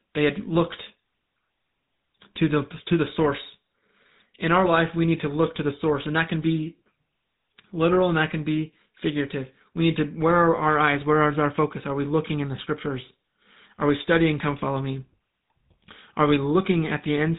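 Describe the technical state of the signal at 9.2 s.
At 9.2 s you're hearing the GSM full-rate codec, which runs through the whole clip. It models the vocal tract and drives it with a sparse, regularly spaced pulse train, so the speech has a buzzy, gravelly roughness, and nothing gets through above 3.8 kHz. All of that fits a 13 kbps GSM full-rate path.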